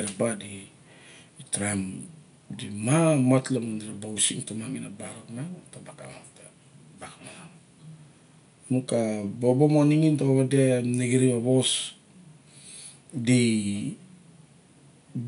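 No technical faults can be heard anywhere in the speech. Some room noise from where the microphone sits is audible underneath it, about 45 dB below the speech.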